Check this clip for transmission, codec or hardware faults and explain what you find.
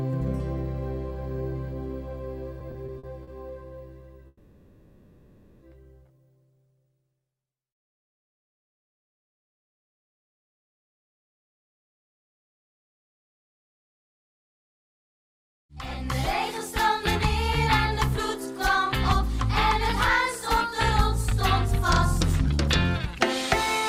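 Three network-timing faults are present, with little or nothing lost.

Repeated stalls (stutter), 2.59 to 3.29 s: six brief holds, the longest 50 ms, where late packets emptied the jitter buffer. The sound drags and hiccups; a spectrogram shows short smeared, repeated slices.

Call audio freeze, 4.27 to 5.63 s: the sound hangs as a fading held buzz or hiss for 1.34 s, likely from packets held in transit. The waveform shows a decaying sustained tail, then a 10 ms silence.

Jitter buffer speed-up, 20.67 to 23.06 s: audio runs at 102% speed, same pitch, as the receiver trims about 50 ms of pitch periods. Spectrogram events compress slightly in time.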